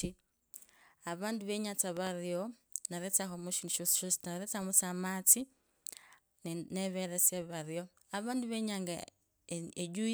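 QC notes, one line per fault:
1.97–2.09 s, loud pop: two sharp pops about 10 dB above the speech, which continues underneath; likely a voltage spike from a plug, switch or static.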